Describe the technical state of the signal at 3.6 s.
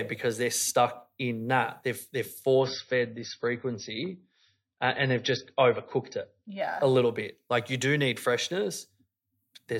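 An adaptive stream at a lower bitrate is playing at 3.6 s, within a stretch from 2.61 to 6.61 s. The stream has dropped abruptly to a much leaner encoding, which fits a low-bitrate MP3, so nothing is heard above 5.9 kHz, the speech sounds dull, and compression artefacts are more audible.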